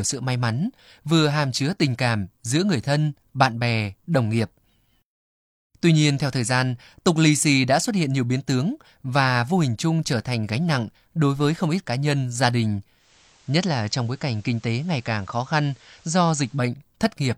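From 12.96 to 16.68 s the receiver shows digital radio blending to analogue, cross-fading over 180 ms to the FM signal. Level dips about 1 dB, and faint hiss appears well below the signal. The hiss sets it apart from a codec bandwidth drop.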